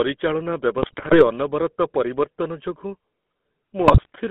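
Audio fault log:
throughout GSM full-rate codec: The speech is confined to a narrow telephone band of about 200 Hz to 3.5 kHz, so it sounds thin and boxy. A plainly audible buzzy, gravelly grain runs under every syllable, which points to the 13 kbps full-rate coder. That coder rebuilds the voice from a vocal-tract filter driven by a sparse, regularly spaced pulse train and discards most of the excitation detail, so fine texture is replaced by a rasping buzz.
0.82–1.26 s and 3.84–4.10 s GSM bit errors: Two bursts of squawking, popping and gargling break up the speech. The first ends just before "ଅନବରତ ପରିବର୍ତ୍ତନ ଯୋଗୁଁ", and the second falls near the end of the clip. The damage points to roughly 3% of the bits arriving flipped, spread over a dozen or more frames in each burst. When corrupted filter, pitch or gain parameters reach the decoder, the spectrum is bent out of shape and the level jumps for a frame at a time, which is why the sound turns chaotic and distorted in bursts.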